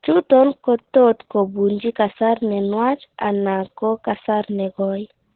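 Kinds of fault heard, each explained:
Opus voice compression: This speech has been through Opus at a very low rate, which sounds like about 8 kbps on the SILK linear-prediction path, where the voice is modelled as a filter driven by a coarsely coded excitation. The band is squeezed to narrowband, with nothing above about 4.2 kHz, so everything sounds muffled and telephone-like. The damage is heavy throughout, and the crude excitation makes the voice hoarse and slightly robotic.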